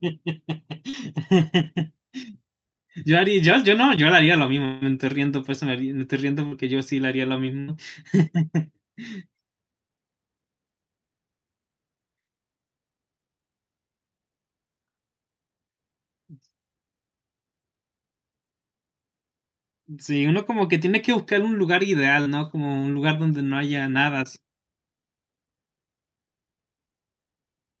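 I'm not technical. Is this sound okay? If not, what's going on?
No. At 0.89, 6.47 and 22.22 seconds there's a tiny smear or wobble in the speech, each lasting about 40 milliseconds. This is short concealed packet loss: a scrap of the call arrived too late, and the receiver covered the hole by stretching the sound just before it.

From 4.65 to 4.83 seconds the speech turns into a held buzz or hiss for under a fifth of a second, then carries on with a little missing. This is most likely a long network dropout. The receiver kept filling the whole gap with a continuation of the last sound, so it never went silent.

At 7.60 to 7.70 seconds a sound briefly freezes into a fading buzz or hiss for about 80 milliseconds, then the speech jumps ahead. That's a burst of packet loss: several pieces in a row were lost, and the gap was covered with the previous sound.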